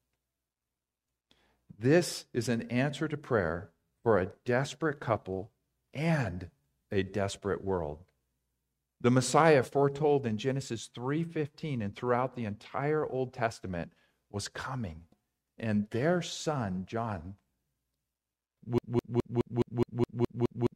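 Speech that, at 18.78 s, falls into a broken-record loop and stays there to the end. A fragment about 0.21 s long repeats exactly, back to back, nine times, so the sound stutters mechanically and whatever should have followed is lost. This most likely comes from a stalled player, encoder or stream resending its last buffer. On a spectrogram the final stretch shows identical blocks tiling every 0.21 s, and the waveform repeats the same envelope shape.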